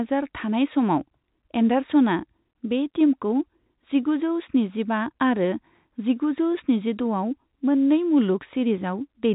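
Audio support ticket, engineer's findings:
Nothing to flag on this speech clip, just ordinary telephone-band audio with nothing above about 3.8 kHz and only faint coding texture, which fits G.711 mu-law at 64 kbps doing its usual job.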